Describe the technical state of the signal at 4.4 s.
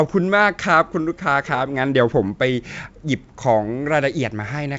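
At 4.4 s the speech is intact, with no fault at that moment.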